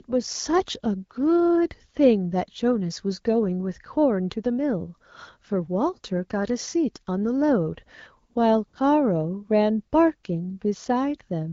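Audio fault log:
8.33–8.35 s and 8.67–8.73 s, AMR comfort noise: speech frames stop and the receiver substitutes smooth synthetic noise, visible as flat, featureless spectrogram patches replacing the real background.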